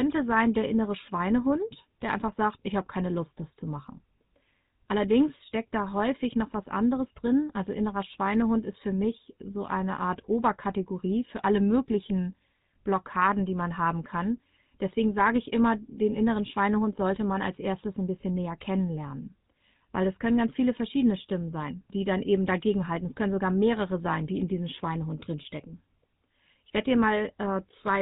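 The whole clip carries plainly audible GSM full-rate codec damage. The speech has a buzzy, gravelly roughness throughout. Nothing comes through above 4 kHz. The codec models the vocal tract and excites it with sparse regular pulses, which fits a 13 kbps GSM full-rate link.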